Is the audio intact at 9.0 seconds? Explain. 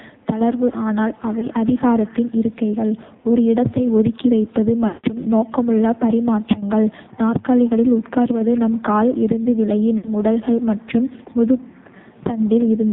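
No, at 9.0 s the speech is still going through the AMR narrowband mobile codec, and that holds for the whole clip, not just this moment. Everything above 4 kHz is gone, so it sounds muffled and phone-like. The codec rebuilds the voice from a vocal-tract model driven by a few pulses per 5 ms slice, and with heavy damage here it comes out buzzy and synthetic, which fits a low rate around 5.9 kbps.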